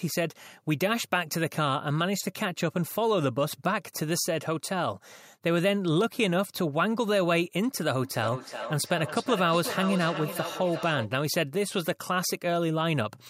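From 8.03 to 11.13 s the speech picks up a feedback echo between two devices. A second device in the room plays this call aloud, and this microphone captures it again. The local echo canceller only removes its own playback, so the sound returns about every 0.4 s, thinner and more ringing, peaking about 9 dB below the speech. On a spectrogram, faint copies of each syllable trail at that regular spacing; the waveform shows matching smeared ridges.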